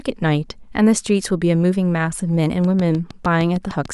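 From 2.64 s to 3.86 s a train of clicks runs over the speech: about ten sharp, near-identical pulses at a steady 6.6 per second, evenly spaced. Each click peaks a few dB above the surrounding signal, so the ticking is heard over the speech and in the gaps in it. The even spacing and repeated shape suggest a periodic disturbance, likely electrical interference from nearby equipment or a faulty connection or power supply.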